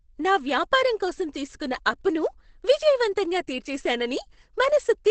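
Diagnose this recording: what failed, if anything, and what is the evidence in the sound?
Opus compression runs through the whole clip and points to the codec stage. The speech sounds muffled and hoarse, with heavy codec damage and nothing above 8.6 kHz, a wideband ceiling. That narrowed band and rough texture point to the encoder having dropped into its SILK speech mode at a very low rate, which fits about 12 kbps. The likely cause is an Opus encode starved of bits, trading the upper spectrum and fine detail for a coarse parametric rendering.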